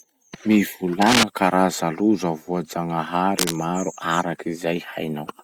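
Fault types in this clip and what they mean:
Cable scratch noise: Rustling bursts sit over the speech at 1.01 s, louder than it, and at 3.38 s, quieter. Likely a worn contact being moved.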